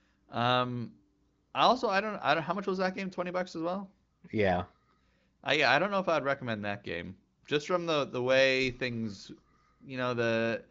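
Nothing is technically wrong with this speech recording, which carries the narrowed top end of an AMR wideband (HD Voice) call at a rate high enough for that codec to keep speech clear.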